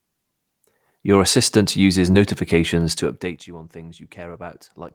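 At 2.11 to 2.15 s, just after "assistant uses", a short stretch of the speech arrived too late for the decoder, an instance of short concealed packet loss. The receiver covered the gap by extending the preceding sound for about 20 ms, then crossfading back into real audio, while another 20 ms was simply missing. The result is a brief smeared wobble where the speech momentarily loses its edges, and any short consonant in that spot can drop out.

From 2.92 to 3.48 s, just before "you on", the level is pulled down by roughly 20 dB, but the gain moves in unsmoothed 2 dB jumps at around 15 steps per second. This is zipper noise: each sudden gain step puts a small discontinuity in the waveform that is heard as a click. Strung together over the fade, the clicks form a ticking, zipping texture riding on the speech for the whole half-second that the level is falling.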